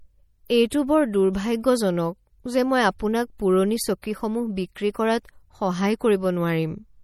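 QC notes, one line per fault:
Throughout: MP3 compression. The speech has plainly audible codec damage and a watery, swirling quality on sibilants. Nothing is present above 17.6 kHz. The likely cause is an encoder short of bits, which fits a low bitrate of around 48 kbps. Weak frequency lines drop in and out between frames.
4.02 s: pre-echo. A brief hiss, about 16 ms long, leads into a sharp attack. The codec spread quantisation noise across its block, so noise sized for the loud onset also filled the quiet moment before it. The attack also sounds softened.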